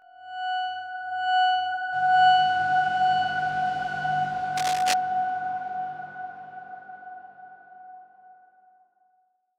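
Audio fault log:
throughout: channel delay (comb filtering). One channel runs roughly 20 ms behind the other, and when the two are summed to mono, the shared content cancels at evenly spaced frequencies starting near 30 Hz. That gives the whole clip a rough, slightly doubled colour. On a spectrogram this appears as regularly spaced dark horizontal stripes that stay put across the entire clip. The waveform looks smeared, with each transient followed closely by a doubled copy.
4.57–4.93 s: cable scratch noise. For about a third of a second a dense, ragged burst of crackle and rustle sits over the sound at roughly 5 dB below the signal. That is loud enough to read as scratching rather than a faint background hiss. The likely cause is a worn cable or connector being moved, so that its contact resistance changes rapidly. A spectrogram would show an irregular broadband smear across that span, and the waveform would show spiky, uneven fuzz riding on top.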